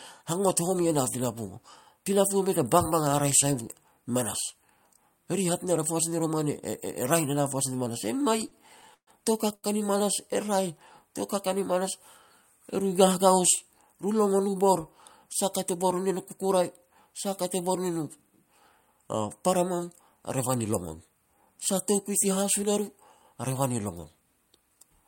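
From 8.41 to 9.10 s, packets kept arriving late, so the jitter buffer ran dry four times. The receiver held the last sound through each gap, fading it in the longer ones, the longest 132 ms, filling 177 ms in all. The result is repeated stalls, a stutter that drags the speech.

At 9.55 to 9.66 s, one packet was not there when it was due, a short stall from a late packet. The receiver stretched the preceding sound by 79 ms until the packet arrived, so a sound is held too long, with a slight buzz or dip.

From 13.94 to 14.49 s, the jitter buffer had built up more audio than it aims for, so the receiver cut out short pitch-period pieces, roughly 70 ms altogether. This jitter buffer speed-up makes the speech run at 111% speed at the same pitch, sounding hurried.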